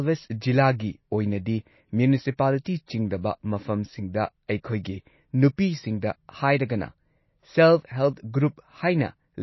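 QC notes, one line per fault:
Throughout, MP3 compression: plainly audible, nothing above 5.8 kHz, watery swirl on sibilants; bits are that scarce, which fits roughly a 24 kbps encode, likely from MP3.
2.64 s, pre-echo: brief hiss smeared about 18 ms ahead of "ꯆꯤꯡꯗꯕ ꯃꯐꯝꯁꯤꯡꯗ", because the block's quantisation noise leaks in before the attack.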